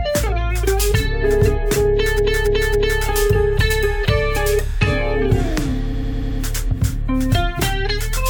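Repeated frames: runs of compressed frames were sent again, so a 0.28 s block stutters through three extra plays at 2.16–3.00 s, and a 0.09 s block through five at 5.92–6.39 s.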